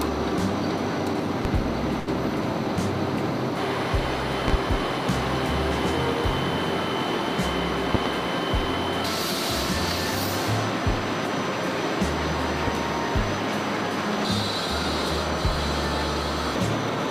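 Loud pop at 1.45 s: a single sharp click stands roughly 15 dB above the sound, which continues underneath. A short stall from a late packet follows at 1.99 to 2.10 s. The receiver's buffer ran dry, so it held the last sound for 74 ms until the packet arrived, then resumed where it left off. Nothing is lost, but that moment drags briefly with a faint buzz or dip in the held sound, and everything after it sits 74 ms later. Further loud pops come as quick doubles at 4.48 to 4.57 s, 7.95 to 8.09 s (the strongest, around 20 dB over the sound) and 12.67 to 12.79 s, each about 15 dB up otherwise. These are likely voltage spikes from a plug, switch or static discharge, shaped by the downstream circuitry into thumps.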